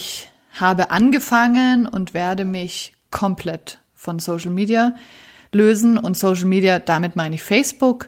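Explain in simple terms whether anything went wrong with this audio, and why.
Nothing went wrong with this audio, because no technical fault can be heard anywhere in it.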